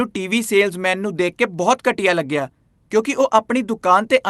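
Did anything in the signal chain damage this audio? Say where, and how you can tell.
No, nothing in the chain damaged this speech; it passed through a normally working call path whose Opus coding, at a rate that fits about 32 kbps, limits the top of the spectrum to around 12 kHz.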